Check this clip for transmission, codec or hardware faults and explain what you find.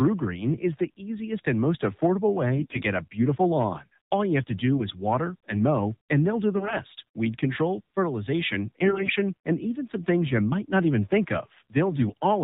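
Two faults are present in this speech clip. Throughout, the AMR narrowband mobile codec cuts everything above 4 kHz. The buzzy, synthetic texture fits AMR-NB at a low rate near 7.4 kbps.

AMR bit errors occur four times. The first is from 2.57 to 2.82 s, after "easiest and most affordable". The second is from 6.56 to 6.75 s, after "mow and they'll do". The third is from 8.84 to 9.11 s. The last is from 11.89 to 12.14 s, after "might not even think". Flipped, weakly protected bits misplace excitation pulses and skew gain and spectral detail. Pitch and level hold, but the voice turns hoarse and gargly, worst near 9 s.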